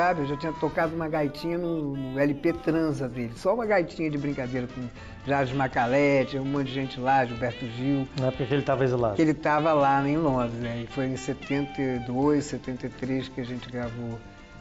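From 0.72 s to 3.68 s the audio shows imaging from linear upsampling. The sound fits a rate raised from 16 kHz to 44.1 kHz by joining samples with straight lines. That is a poor filter. The top of the original band sounds dulled. A faint mirror copy of the spectrum sits between 8 kHz and 16 kHz, roughly 40 dB below the signal. It adds a thin metallic shimmer to the brightest parts.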